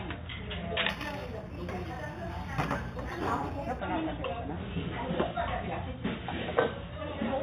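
A recording of everyday sounds has imaging from linear upsampling at 0.89–3.79 s. Straight-line interpolation from 8 kHz to 48 kHz leaves a faint metallic mirror, roughly 25 dB down, at 4–8 kHz. On a spectrogram it appears as a reflected band above 4 kHz.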